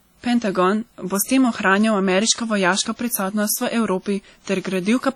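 Speech, with heavy WMA compression throughout. Coarse quantisation smears noise over tens of milliseconds, so the sound rings and washes. Hiss breathes with the voice, likely from a bitrate near 32 kbps.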